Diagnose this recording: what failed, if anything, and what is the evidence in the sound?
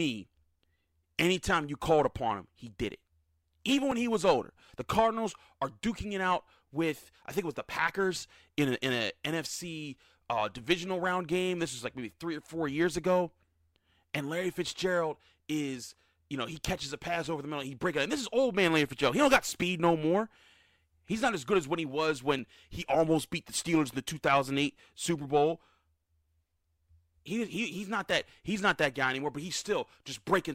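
Three isolated sharp clicks cut through the speech at 3.92, 22.39 and 28.11 s, each a thin vertical line across the spectrum. These are likely dropped samples at the driver or buffer stage: under a millisecond of audio goes missing, so the waveform jumps abruptly without any audible gap.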